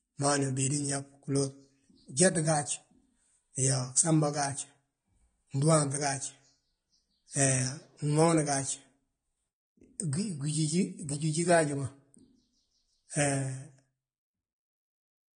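Speech throughout carries plainly audible AAC compression damage, likely from AAC-LC at a low bitrate near 32 kbps: nothing reaches above 9.7 kHz, and sibilants and held vowels warble and smear, a fizzy shifting texture a plain low-pass filter wouldn't add.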